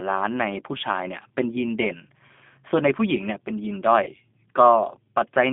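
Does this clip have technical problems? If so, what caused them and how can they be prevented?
Yes. The speech carries G.729 codec damage throughout: the band is limited to about 250 Hz to 3.6 kHz, and pulse-based reconstruction leaves a plainly rough, synthetic texture that fits an 8 kbit/s G.729A stream. To prevent it, use a wideband codec such as G.722 or Opus where bandwidth allows.

VoIP packet loss concealed by the speech codec occurs from 4.04 to 4.09 s. About 30 ms of audio is missing, pointing to a single lost packet. The decoder extends its last pitch and filter into a buzzy tone or coloured noise that fades, and the speech stays degraded briefly after the packet stream returns. To prevent it, improve network quality of service and add a jitter buffer or forward error correction.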